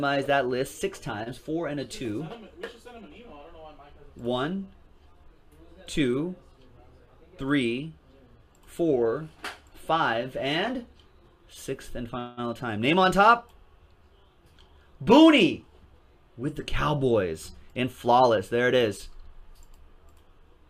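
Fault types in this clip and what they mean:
Short stall from a late packet: at 1.23 to 1.29 s the sound is held on for about 26 ms instead of moving forward, with a faint buzzy smear where it should have changed. A packet arrived after its playout time. The jitter buffer briefly had nothing to play, so the receiver extended the last stretch of audio and then resumed at the same point. Nothing is lost, but everything afterwards runs 26 ms later.
Call audio freeze: at 12.19 to 12.40 s the sound stops progressing and a stretched, buzzy continuation of the last moment fills about 181 ms. It never drops to silence, and playback picks up exactly where it left off, with nothing skipped. The likely cause is packets held up in transit, leaving the jitter buffer empty. The receiver padded the wait with synthesised sound, which adds a 181 ms delay to the rest of the clip.
Jitter buffer speed-up: at 7.00 to 7.45 s, 14.98 to 16.60 s and 17.63 to 18.38 s the sound runs slightly fast at unchanged pitch. 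The rate is about 108% in the first stretch and 107% in the other two, giving a hurried, compressed feel. The buffer was holding more audio than its target, so the receiver trimmed tiny pitch-period slices in quick succession. This removed roughly 40 ms, 100 ms and 50 ms respectively, winning back the accumulated delay.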